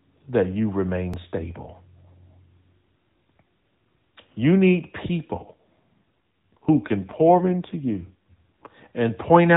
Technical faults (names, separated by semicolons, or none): overlapping chunks; AMR rate drop